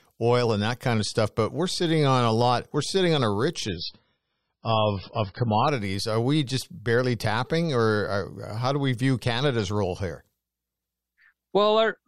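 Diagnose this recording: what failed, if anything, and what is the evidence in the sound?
Right after "we're sitting on a", from 3.68 to 5.68 s, the speech abruptly turns dull and swirly, with nothing above 5.6 kHz, then recovers with no gap. This is an adaptive stream at a lower bitrate: a network slowdown forced a lower-quality version, consistent with MP3 falling from 128 to 16 kbit/s.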